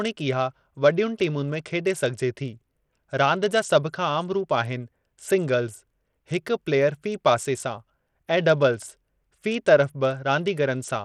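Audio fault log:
Throughout, Bluetooth SBC compression: the speech loses its upper treble, which thins and flickers in and out, and a gritty grain with aliasing rides on the sound. This is likely SBC coding at a small bit pool, consistent with a bitrate of roughly 80 kbps. The codec splits the signal into a few wide sub-bands with no hearing model, so the weak top bands are starved of bits and the rest are coarsely quantised.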